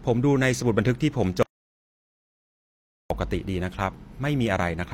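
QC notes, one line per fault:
1.43 to 3.10 s, audio dropout to silence: speech cuts off mid-flow for 1.68 s of silence, no room tone. Input likely lost while writing continued.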